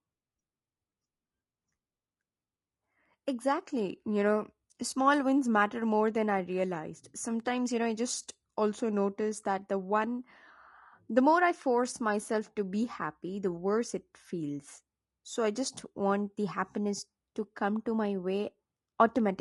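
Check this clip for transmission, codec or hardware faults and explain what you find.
One codec fault runs through the whole clip. From start to finish the speech sounds rough and grainy: noise fills the gaps between the voice's harmonics, and the top band comes across as thin and synthetic rather than natural. This is likely low-delay AAC compression (AAC-ELD), the codec of video calls, at a rate that fits around 32 kbps. Its short frames of about 500 frequency lines separate pitch harmonics poorly, and at this low bitrate the damage is plainly audible.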